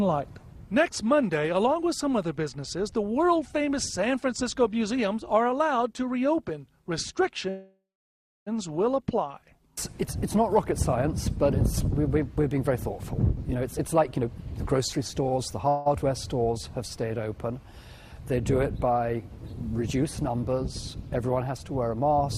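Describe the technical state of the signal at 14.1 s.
At 14.1 s the sound is running hurried: it plays about 16% faster than normal while keeping its pitch, from 13.54 s to 15.68 s. This is a jitter buffer speed-up. The receiver's buffer had built up more audio than its target, so it repeatedly trimmed out short slices, each one or a few pitch periods long, to catch up. Altogether around 0.4 s of audio is dropped across that stretch.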